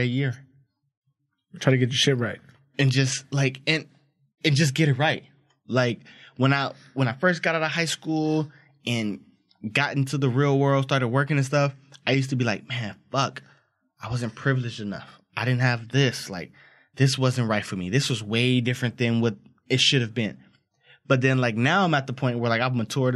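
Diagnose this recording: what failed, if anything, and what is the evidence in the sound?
Nothing failed in this recording, and the sound gives no evidence of any fault.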